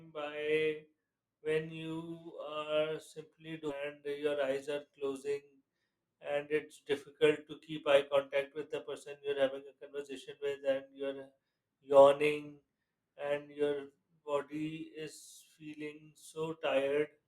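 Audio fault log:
3.69 to 3.73 s, stream segment skipped: the speech jumps forward abruptly, with a short blip of about 40 ms at the join, so the sound on either side does not connect and a stretch of the programme seems to be missing rather than paused. The likely cause is a segmented stream in which one segment failed to load and the player moved straight on to the next, splicing the audio across the gap.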